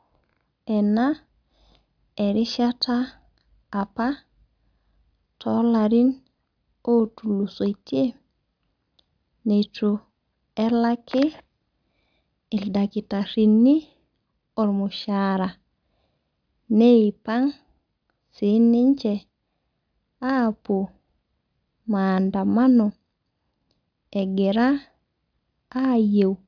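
Listening to the speech here, nothing stood out as a technical problem at any point.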